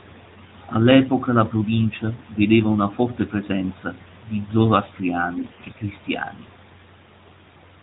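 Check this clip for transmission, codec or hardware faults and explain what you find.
One transmission fault stands out in this speech clip, heard through narrowband AMR coding that removes everything above 4 kHz.

AMR bit errors, 5.38 to 5.75 s: about one bit in ten of the less protected frame data arrives flipped while the core checksum still passes, so pulse positions and fine pitch, gain and spectrum values go wrong. Pitch and level hold roughly, but the sound turns hoarse, scratchy and gargly. The span fits a run of around eighteen 20 ms frames.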